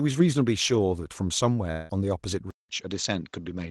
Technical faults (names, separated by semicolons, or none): long network dropout; input switched to a poorer device